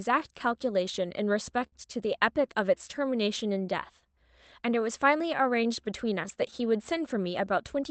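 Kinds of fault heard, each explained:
Clock drift between sender and receiver: the sender's clock runs about 5% slow, so the jitter buffer keeps draining, leaving small, unevenly spaced stretches visible across the waveform.
Repeated timing corrections: from 0.97 to 7.87 s the receiver pads tiny pieces, slowing the tempo to 97% and adding about a fifth of a second. The spectrogram shows subtly drawn-out segments.
Repeated stalls (stutter): between 1.08 and 1.75 s the buffer ran empty three times, longest 56 ms. Each held sound appears on the spectrogram as a smeared tail.
Scattered short gaps: around seven tiny holes between 4.7 and 7.17 s, each about 10 ms at most, filled by continuing the sound. They appear as faint vertical seams on the spectrogram.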